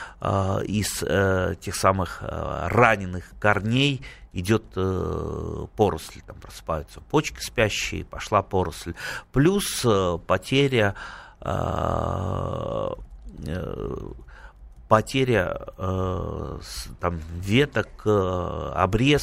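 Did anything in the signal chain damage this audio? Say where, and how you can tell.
No, nothing along the chain audibly damaged this speech, and no stage shows evidence of a fault.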